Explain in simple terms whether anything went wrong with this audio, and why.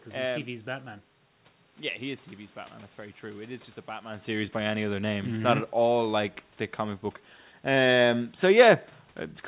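Nothing went wrong with this audio, because none of what can be heard in it comes from a fault.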